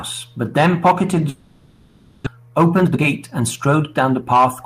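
At 1.29 s the speech stops and gives way to a synthetic continuation of the last sound. This fill runs for about 0.97 s and never falls to silence. At 2.28 s real speech returns, but part of it is gone. Roughly 0.6 s of audio never plays. The likely cause is a long network dropout. The receiver had nothing to play and patched the gap itself. The delay grows by roughly 0.4 s.

From 2.36 s to 4.37 s the speech runs fast, at about 117% of normal speed. The pitch stays the same. This is a jitter buffer speed-up. Late audio had piled up in the buffer after the gap. The receiver trimmed many short pitch-period slices to catch up. In total it dropped roughly 0.4 s. The talker sounds rushed until the backlog clears.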